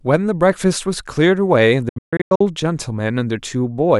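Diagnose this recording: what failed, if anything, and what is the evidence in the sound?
Between 1.89 and 2.41 s the speech breaks up into a cluster of abrupt silent gaps. About 0.37 s of sound is missing across that half-second, with the longest single hole lasting 0.14 s, and each time it returns the speech has moved on rather than picking up where it stopped. The stage is playback over a wireless link, and the likely cause is a Bluetooth dropout: packets reached the headphones too late, were discarded, and left silence until good data resumed.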